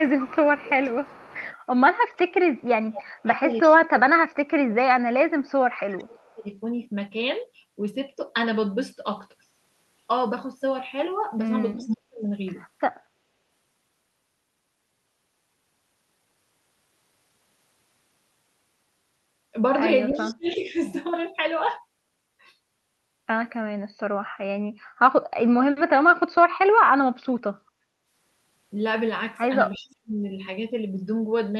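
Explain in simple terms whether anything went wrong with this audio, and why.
Speech suppressed in double talk, from 0 to 6.5 s, 11.75 to 12.25 s, 20.1 to 20.8 s and 29.75 to 30.2 s: the voice dips sharply or drops out, likely because the echo canceller turned the voice down while both sides spoke.

Echo leak, from 0.08 to 6 s and briefly near 11.9, 20.1 to 20.5 and 29.8 s: a copy of the voice returns about a third of a second late, likely loudspeaker sound the echo canceller failed to remove.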